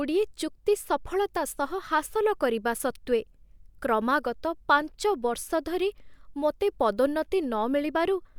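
Listening through the speech recording, nothing technically amiss stood out at any point.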